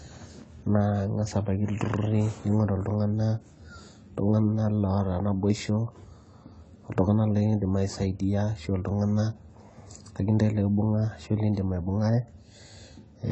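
Throughout the speech the sound is dull and smeared, with nothing above 8.9 kHz and an audible warbling, fizzy edge on sibilants. This is likely AAC compression, with the encoder discarding high frequencies and coarsely quantising the rest, which fits a low bitrate around 24 kbps.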